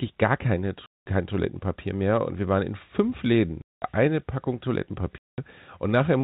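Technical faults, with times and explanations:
0.86 to 1.06 s (just after "gar keine"), 3.62 to 3.82 s and 5.18 to 5.38 s: packet loss filled with silence. Each gap is a 200 ms dead hole with hard edges, which fits ten 20 ms packets, unlike a fade or a smoothed concealment.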